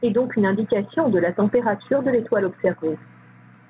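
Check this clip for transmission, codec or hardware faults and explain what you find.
Gain pumping runs through the whole clip. The gain swings by around 10 dB. The likely cause is input gain set far too high, with a fast limiter or compressor clamping down on every peak and releasing in the pauses. Loud and quiet passages end up squeezed close together, so the speech sounds flattened. The call path sits alongside this: nothing reaches above 4 kHz, and the band edge and coding noise fit a 64 kbps G.711 mu-law stream.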